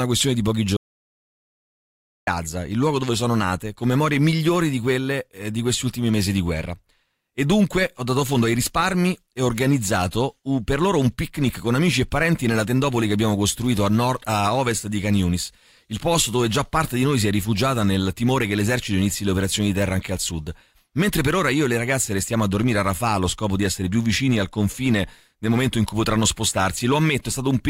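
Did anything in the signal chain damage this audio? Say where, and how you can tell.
Yes. Crackle rides the loudest speech peaks throughout: hard clipping, with the converter overdriven by about 3 dB so that a small fraction of peaks are squared off.

After "questione di pochi", total silence with no room tone runs from 0.77 to 2.27 s before "il luogo dove sono". This audio dropout to silence was likely caused by the input link failing.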